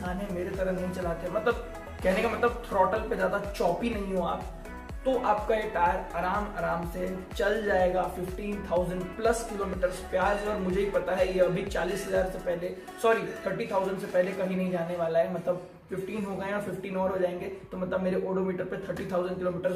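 No technical faults can be heard anywhere in this clip.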